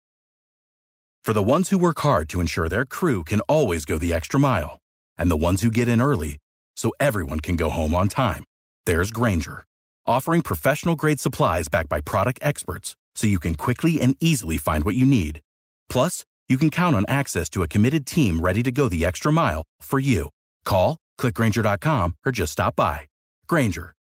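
No technical faults are audible anywhere in this speech.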